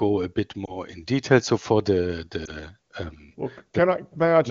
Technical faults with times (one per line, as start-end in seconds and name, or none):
0.65-0.79 lost AMR speech frames
2.45-2.50 lost AMR speech frames